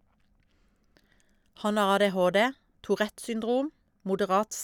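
No technical faults can be heard anywhere in the recording.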